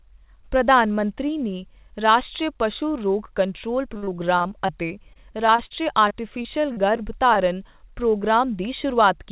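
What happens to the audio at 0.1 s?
Nothing goes wrong at 0.1 s; the speech comes through intact, carried over the call path's narrowband telephone-style coding with nothing above about 4 kHz.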